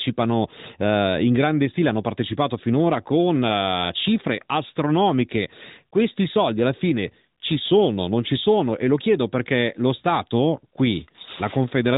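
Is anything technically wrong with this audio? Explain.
No, nothing is technically wrong.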